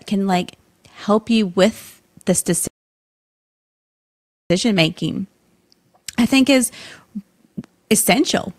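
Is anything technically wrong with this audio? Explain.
Yes. From 2.67 s to 4.50 s the speech drops abruptly into silence, then picks up again at exactly the point where it broke off, with nothing skipped. This is a rebuffering stall: playback exhausted the audio it had already downloaded and waited for more data before continuing. No content is lost, but the gap adds about 1.83 s of dead air, which stretches the clip and interrupts the flow of the speech.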